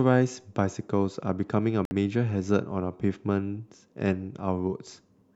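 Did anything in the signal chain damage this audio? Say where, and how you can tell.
Yes: a Bluetooth dropout at 1.85 to 1.91 s, where the speech cuts to silence for about 58 ms, then resumes further along as if it had kept playing. The wireless link to the headphones likely dropped a few packets that arrived too late.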